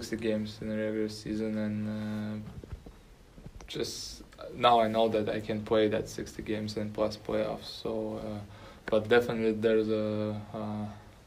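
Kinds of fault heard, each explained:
Nothing in the way of a technical fault turns up anywhere in this one.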